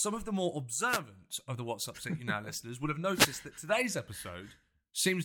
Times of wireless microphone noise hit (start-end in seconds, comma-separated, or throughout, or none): 0.86-1.01, 3.13-3.30